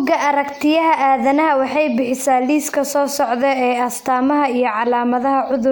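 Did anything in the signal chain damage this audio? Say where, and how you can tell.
No, nothing along the chain seems to have harmed this speech recording, and I can't hear any point where a stage has left its mark on it.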